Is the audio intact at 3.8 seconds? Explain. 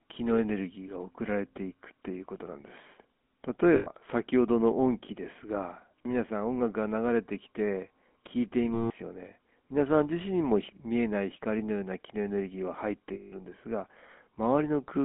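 No. From 3.76 to 3.88 s there are lost GSM frames. The decoder fills the gap by repeating the last good frame's vocal-tract and excitation settings, so the speech freezes into a rough, metallic ring. The roughly 100 ms of missing signal fits about five 20 ms frames.

The moment also carries the GSM full-rate codec present throughout. Its pulse-driven vocal-tract model gives the speech a plainly audible buzzy, gravelly roughness, and the line band stops near 3.4 kHz, in a 13 kbps full-rate stream.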